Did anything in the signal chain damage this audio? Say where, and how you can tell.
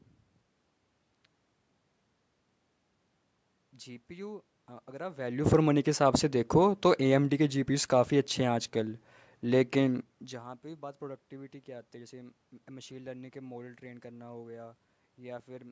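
No, nothing in this speech stood out on listening as damage from any stage of the chain.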